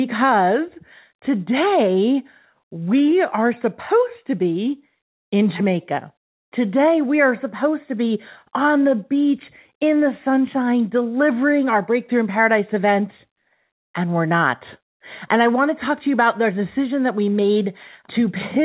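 Nothing stood out on listening to the speech, which comes through a call path whose audio stops at about 4 kHz, which fits the G.711 mu-law codec.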